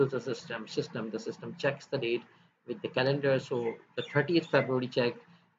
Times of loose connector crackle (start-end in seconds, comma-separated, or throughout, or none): none